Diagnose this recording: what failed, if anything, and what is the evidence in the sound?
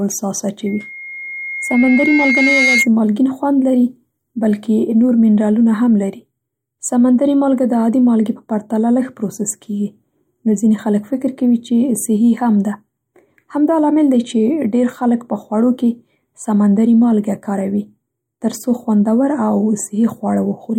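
Loudspeaker feedback squeal sits in the acoustic loop between playback and microphone. From 0.66 s to 2.88 s a steady 2.1 kHz tone swells over about two seconds until it is roughly as loud as the speech. At that frequency the loop gain exceeded one, so the tone fed itself.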